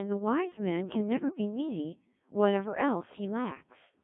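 From start to finish the speech passes through a Codec 2 vocoder, and the damage is heavy. Only pitch, voicing, energy and a spectral outline survive, rebuilt from sine waves. It sounds robotic and buzzy, confined to 150 Hz to 3.5 kHz, at a rate near 1.3 kbit/s.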